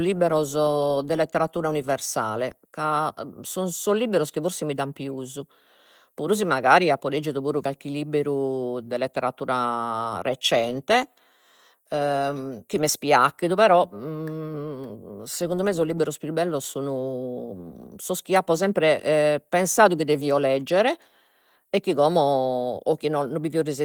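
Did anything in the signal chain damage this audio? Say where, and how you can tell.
No, nothing in this speech stood out on listening as damage from any stage of the chain.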